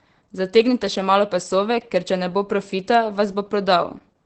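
Opus voice compression runs through the whole speech clip, its sound pointing to a low bitrate near 12 kbps in the SILK linear-prediction mode. Nothing remains above 8.6 kHz, and the coarsely coded excitation leaves the speech plainly muffled, hoarse and faintly robotic.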